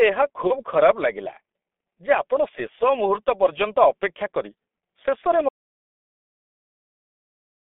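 Throughout, the speech sounds muffled and hoarse, confined to roughly 250 Hz to 3.5 kHz. This is G.723.1 codec damage; the smeared consonants fit a bitrate near 6 kbit/s.

From 0.47 to 0.60 s the sound is briefly stretched and weak. This is VoIP packet loss concealed by the speech codec: about 30 ms went missing, and the decoder padded the gap from its last frame and took a while to recover.

After "ଅପେକ୍ଷା କରି ଶେଷରେ", at 5.49 s, the audio drops to complete silence through to the end. This audio dropout to silence likely came from the input being lost while recording continued.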